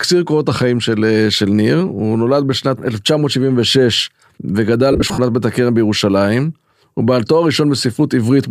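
From 4.92 to 5.18 s there's a patch of lost LE Audio frames, about 150 ms of gaps scattered across roughly a quarter second, with the longest run around 50 ms. The LC3 decoder covered each hole by repeating the last good spectrum with its phases scrambled, so the speech turns briefly into a rough, noisy smear that flickers in and out rather than a clean dropout, before normal sound picks up again.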